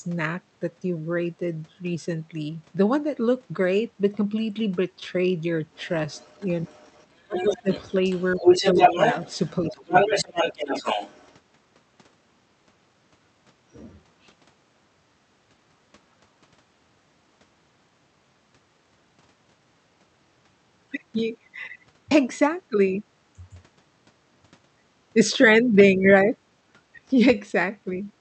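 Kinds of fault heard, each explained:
Other side's voice leaking through: 5.75–5.89, 6.09–6.5, 6.66–7.06, 7.36–9.51 and 9.67–11.34 s, a second voice faint at first, then roughly as loud as the talker from 7.36 s, likely loudspeaker echo the canceller failed to remove from the microphone.
Speech suppressed in double talk: 7.26–7.68, 8.74–8.82 and 9.69–10.13 s, the talker's level dips, by roughly 20 dB at first, then slightly, then about 10 dB, likely because the canceller couldn't separate talker from echo and turned both down.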